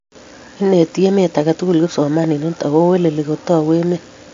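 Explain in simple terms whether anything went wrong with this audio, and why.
MP3 compression, likely, runs through the whole speech clip from start to finish. Nothing remains above about 7.2 kHz, so the treble is cut off and the speech sounds dull, and weak details flicker in and out, giving a plainly audible watery, swirly quality.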